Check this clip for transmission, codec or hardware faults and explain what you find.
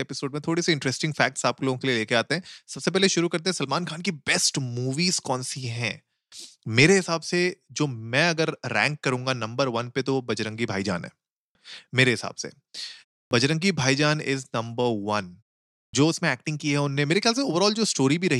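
There's one kind of fault here, a clipped start after a pause, and it shows up twice. At 13.27 s, after a 0.31 s gap, the sound resumes with about 42 ms missing. At 15.89 s, after a 0.55 s gap, about 43 ms is gone. The output device drops into a sleep state during the silence and needs a moment to wake or relock, so the onset is swallowed and the speech jumps in abruptly without its first sounds.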